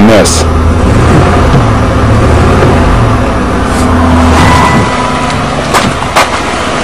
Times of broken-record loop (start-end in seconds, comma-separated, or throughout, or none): none